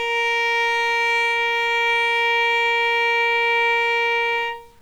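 From the first moment to the last, the sound carries a grainy, gritty edge that shifts along with it, the signature of low bit depth without dither. It points to the audio having likely been squeezed down to around 8 bits with plain rounding, so the error tracks the sound instead of sitting as a steady hiss. The distortion sits roughly 40 dB under the signal, which makes quieter moments turn rough.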